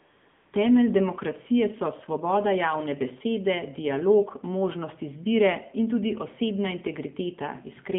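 From 0 to 0.52 s the clip opens on AMR comfort noise. For just over half a second the sending phone judged the line silent and sent no speech frames, so the receiver filled the gap with noise built from a rough summary of level and spectrum. The result is a smooth, steady hiss that switches off abruptly when speech starts. Ordinary background noise would fluctuate and blend into the speech. This noise is uniform and ends at a frame boundary.

Across the whole clip the speech carries the sound of the AMR narrowband mobile codec. Its band runs from roughly 150 Hz to 3.6 kHz, which leaves the voice thin and boxy with no sibilant air above the cutoff. The codec damage is plainly audible: voiced sounds take on a buzzy, synthetic edge, which fits one of the codec's lower modes, around 7.4 kbps. Simple band-limiting alone would sound muffled but natural. Here the timbre itself is rebuilt by a vocal-tract model, and that gives the buzz.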